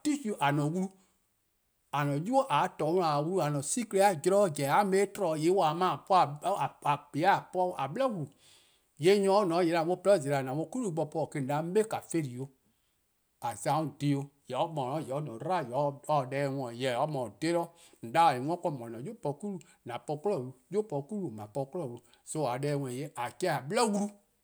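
Nothing goes wrong anywhere in this stretch of speech, so there's no technical fault to point to at any moment.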